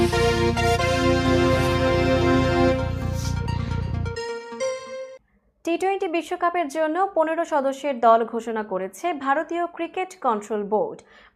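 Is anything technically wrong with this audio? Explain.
No, nothing technically wrong can be heard in this audio.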